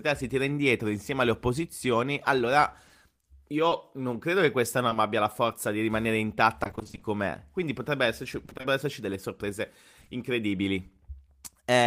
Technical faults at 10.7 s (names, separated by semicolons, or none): none